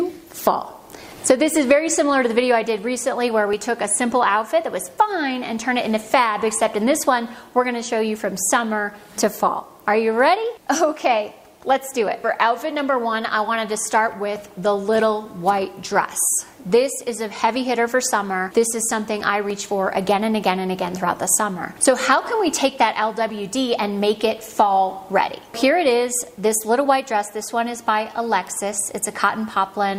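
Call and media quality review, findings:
Low bit depth without dither: grainy distortion throughout that moves with the sound, worst on quiet passages, which sputter or cut out instead of fading. Likely truncation to about 9 bits with no dither, error roughly 40 dB below signal. Unlike steady hiss, it tracks the level.

Overlap between stream segments: brief click or skip at 3.53 s and 19.5 s. Player trimming overlapping segment timestamps and removing a few milliseconds of real audio, so the waveform jumps. Fits 4 s segments. No silent gap or repeated audio, unlike a dropout or duplicate segment.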